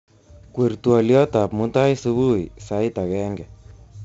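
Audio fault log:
Throughout, 4-bit ADPCM compression: each sample is coded as a coarse step off a prediction, so gritty hiss rides on every loud stretch of speech, with heavy distortion on sharp onsets. Nothing above 7.8 kHz, which fits a 64 kbps stream.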